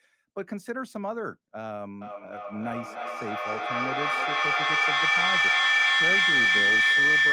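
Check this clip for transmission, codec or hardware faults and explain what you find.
There's one fault here: feedback howl from 2.01 s through to the end. A mic and speaker are looping, each pass getting louder, so a tone near 2 kHz builds, with a loop delay of roughly a third of a second, peaking about 12 dB above the speech.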